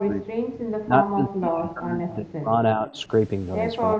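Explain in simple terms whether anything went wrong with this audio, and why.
Speech suppressed in double talk occurs from 0.00 to 0.57 s, from 0.82 to 2.53 s, from 2.75 to 2.90 s and from 3.96 s to the end. The speech sinks sharply in the first two stretches, almost disappearing, then dips only slightly at 2.75 s and moderately at the very end. This is likely because both people talked at once, and the call's echo canceller, unable to tell the real talker from loudspeaker echo, turned everything down.

Echo leak appears from 2.09 to 2.15 s and from 2.89 to 3.07 s as a faint, delayed copy of the speech trailing about 0.36 s behind, quieter still the second time. The likely cause is a far end playing the call on a loudspeaker, where the echo canceller failed to remove everything its microphone picked up, so scraps of the sound were sent back down the line.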